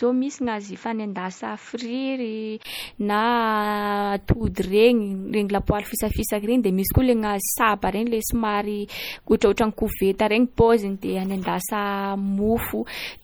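From the start until 2.65 s, the speech sounds dull and narrow, with nothing above 7.6 kHz and a faint added noise sitting well below the voice. A brief gap of about 20 ms at 2.65 s marks the change, after which the top end opens up at the same loudness. This is an input switched to a poorer device, likely a second microphone or a headset's call profile with a restricted band and its own noise, before the recording returned to the fuller input.

Across the whole clip the speech carries a swirly, smeared quality, with watery high frequencies. The file's generous bitrate does nothing to clean this up. These are the marks of low-bitrate audio saved at a high bitrate. The artefacts point to an earlier MP3 encode at around 48 kbit/s, which likely discarded that detail for good, and a later 256 kbit/s MP3 pass then simply preserved the damage.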